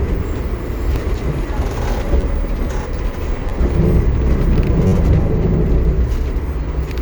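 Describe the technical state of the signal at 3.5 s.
At 3.49 to 3.51 s there is a repeated buffer fault: new audio arrived late, so the playback device replayed its last block, about 10.7 ms long (which fits a 512-sample buffer), two extra times. Each repeat meets the next with a hard join, and at this tiny block size the result is a click or brief buzz rather than a stutter. Unlike a dropout, no silence or gap appears and essentially no audio is lost.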